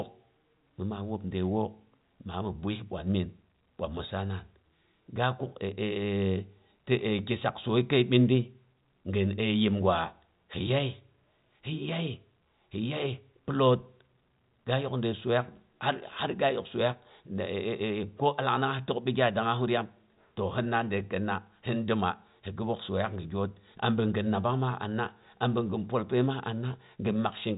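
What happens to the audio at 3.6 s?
Nothing goes wrong at 3.6 s: the speech passes through intact, carried by a narrowband call path that leaves nothing above 4 kHz.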